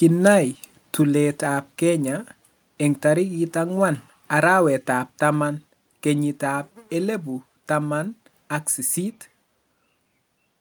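Microphone volume stepped down at 1.02 s and again at 5.1 s, between "ang'wan arawet ab" and "taman kenyit ab elipu": the speech and background drop abruptly by about 3 dB, then about 2 dB, likely because the call software judged the input too loud and lowered it.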